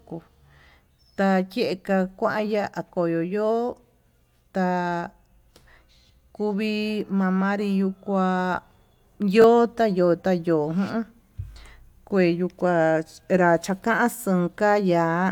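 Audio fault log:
9.42–9.44 s, repeated buffer: a 20 ms slice plays twice, just before "yota yo'ó". New audio arrived late, so the last block was replayed. That fits a 20 ms buffer. The hard joins give a brief click-like buzz, and about 20 ms of audio is lost.
11.52–11.56 s, repeated buffer: the same 20 ms slice sounds three times, just before "kue yuu". It is heard as a short stutter with hard joins, and about 40 ms of audio is dropped.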